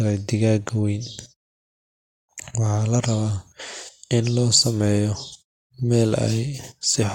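Nothing stood out as a fault on listening to this speech; the background dips away in the pauses and comes back in time for each phrase, as muted pauses should.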